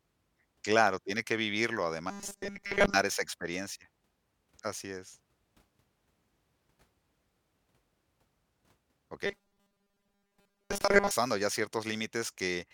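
From 2.10 to 2.94 s, between "tiene que vivirlo" and "esa experiencia", the speech becomes a rigid metallic buzz at 200 Hz. The likely cause is robotic sound from repeated short buffers. A 5 ms slice replays while most real audio is skipped. It recurs from 9.26 to 11.11 s.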